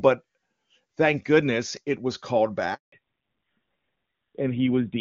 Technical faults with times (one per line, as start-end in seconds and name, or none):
2.74-2.92 handover gap
2.92-5.00 fallback to narrowband